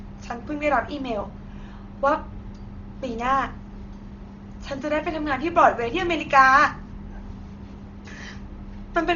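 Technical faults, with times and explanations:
Throughout, Dolby Digital compression: the speech sounds dull, with nothing above 7 kHz and a rough, fluttering noise around its tones. The likely cause is starved AC-3 coding, fitting a 32 kbps rate, where bitless frequency lines get filled with dither noise.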